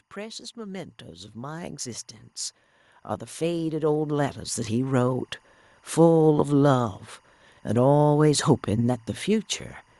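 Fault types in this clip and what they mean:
Automatic gain rising, from 0.14 to 2.14 s and again from 3.38 to 6.0 s: the gain control judged the incoming level too low and turned itself up step by step, so the speech and the room noise beneath it swell together rather than the voice alone getting louder. The first climb adds about 7 dB over two seconds; the second, slower one adds about 9 dB across roughly two and a half seconds.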